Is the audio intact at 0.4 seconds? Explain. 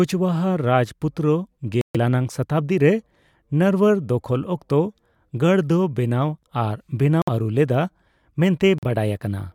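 Yes, the speech at 0.4 seconds plays through intact, with no audible fault at that moment.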